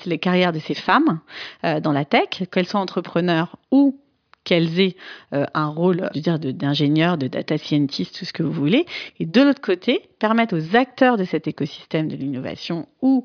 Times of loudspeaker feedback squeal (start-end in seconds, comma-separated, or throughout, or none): none